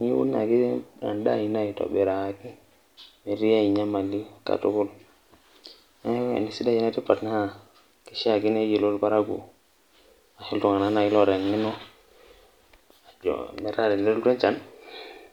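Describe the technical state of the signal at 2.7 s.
At 2.7 s the signal is intact, with no audible technical fault at that point in the speech.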